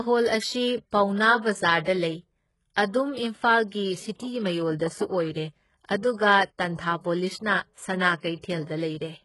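All the way through, the speech carries heavy damage that's likely HE-AAC compression, fitting a very low bitrate near 12 kbps. The treble is copied up from lower bands and stops near 11.5 kHz, leaving s sounds gritty, metallic or lispy.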